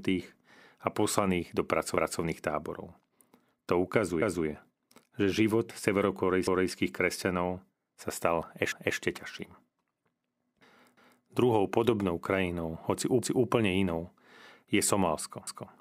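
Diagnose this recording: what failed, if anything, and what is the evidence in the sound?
Overlapping chunks at the buffer stage. The speech stutters at 1.97, 4.22, 6.47, 8.72, 10.97, 13.22 and 15.47 s, the first just after "a poslaných do". Each 2 s chunk starts 250 ms before the previous one ended, so that slice replays at every join.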